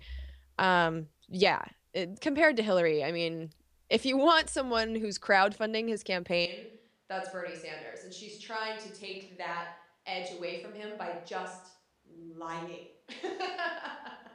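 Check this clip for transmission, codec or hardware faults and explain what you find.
One hardware-side fault is present, running from partway through the clip to the end.

Switch to a distant microphone, from 6.46 s to the end: just after "someone who's crowdfunding his", the close microphone's signal likely dropped out and a microphone further from the speaker took over. The speech turns hollow and roomy at once, loses its low-end body, and falls roughly 10 dB in level. The room's background noise also becomes noticeable, sitting somewhere around 35 dB below the speech. The change is abrupt and doesn't reverse.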